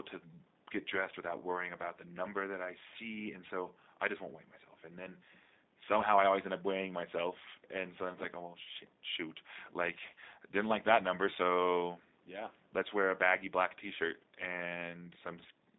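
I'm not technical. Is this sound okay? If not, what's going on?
No. The speech went through the G.729 codec, a low-data phone-call format that rebuilds voices from a rough model. Throughout the clip the speech sounds thin, phone-like and slightly rough or robotic. A plain phone line would sound narrow but natural; this sound is also buzzy and synthetic.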